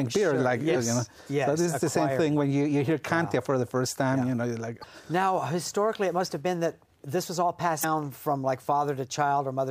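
Damaged data in a compressed stream hits at 0.72 to 0.76 s, 4.80 to 4.84 s and 7.80 to 7.84 s. Each lasts about 40 ms. Corrupted bytes make the decoder misread frames and lose sync. It then hunts for the next frame header, leaving a brief disruption.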